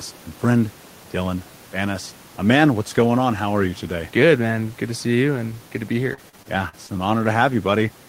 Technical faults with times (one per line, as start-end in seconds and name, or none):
6.13-6.91 repeated packet loss (robotic sound)